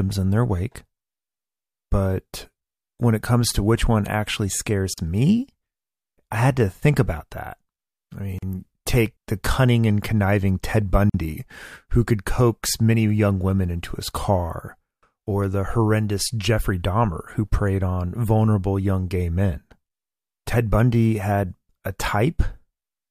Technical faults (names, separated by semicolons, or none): gap at a join of encoded pieces